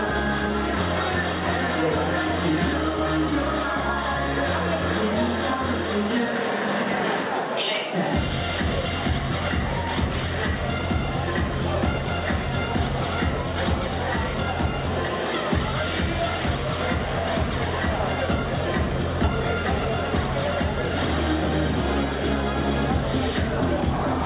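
No technical faults can be heard anywhere in this recording. There is no break, dropout or disturbance to report at any point.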